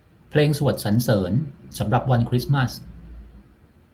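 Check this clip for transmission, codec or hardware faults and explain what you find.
Nothing stood out on listening to the speech in this clip.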